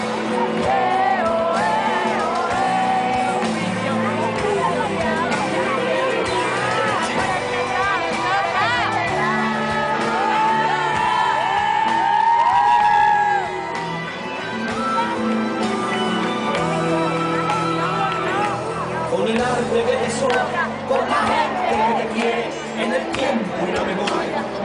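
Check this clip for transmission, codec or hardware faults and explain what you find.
No transmission, codec or hardware faults can be heard anywhere in the clip. There is nothing to point to or explain.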